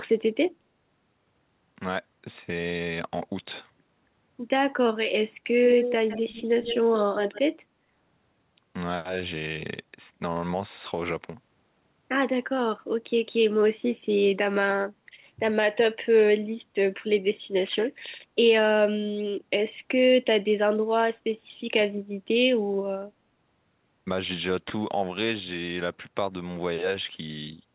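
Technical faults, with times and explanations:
5.64–6.85 s and 7.13–7.41 s, echo leak: you can hear a fainter copy of the speech trailing the original by about 159 ms, sitting roughly 10 dB under it, first for just over a second and then in a short scrap. The likely cause is a far end on loudspeaker whose echo canceller didn't fully scrub what its mic picked up, so that residue came back down the line. Since the call runs over G.711 with nothing above 4 kHz, the echo sounds just as narrowband as the speech.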